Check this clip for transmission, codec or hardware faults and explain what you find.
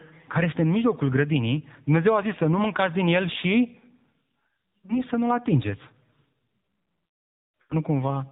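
Yes, two things. The whole clip has AMR narrowband mobile codec coloring: nothing above 4 kHz, and a buzzy, synthetic voice that fits a low mode around 7.4 kbps.

There are also lost AMR speech frames at 4.86–5.02 s and 7.62–7.77 s. The decoder reused the last good pitch and vocal-tract settings with falling gain, so you hear a brief dip, then a longer drawn-out fade. That fits about one and about four lost frames respectively.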